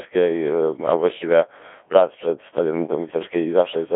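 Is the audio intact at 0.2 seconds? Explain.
No. Codec 2 vocoder damage runs through the whole clip. Resynthesis from sine waves leaves the speech buzzy and robotic rather than warbly, band-limited to 300 Hz–3.5 kHz, at a rate suggesting about 1.6 kbit/s.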